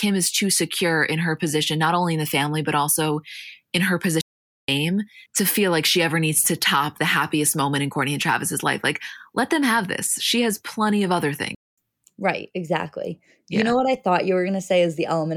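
Speech clip with two playback stalls where the audio just drops to silence mid-flow: the first at 4.21 s lasting about 0.47 s, the second at 11.55 s lasting about 0.23 s. Neither sounds like a natural pause; the sound is cut off and then picks up again. The likely cause is the player starving for data or its thread getting blocked, so output went quiet until it caught up.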